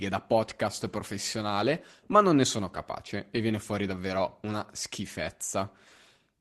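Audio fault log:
0.91–0.93 s and 3.95–3.97 s: lost packet rebuilt from error correction. Just after "da podcast" and after "capace e viene fuori", a 20 ms stretch turns rougher and noisier with no gap. This suggests a single lost Opus packet was replaced by the low-bitrate copy carried in the following packet.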